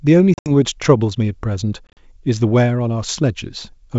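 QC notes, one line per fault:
0.34 to 0.51 s, packet loss on an ADPCM call: about 110 ms of sound drops out in hard-edged gaps, the longest around 70 ms, and the decoder's predictor loses track, so the audio comes back slightly distorted before settling.
1.87 to 1.99 s, packet loss on an ADPCM call: same thing again, about 80 ms missing, longest gap 40 ms, with that brief mismatched, slightly distorted return as the ADPCM state recovers.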